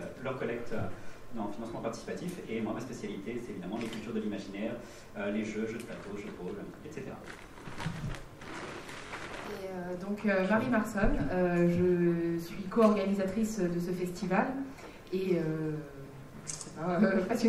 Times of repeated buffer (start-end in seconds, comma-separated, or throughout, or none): 9.07-9.11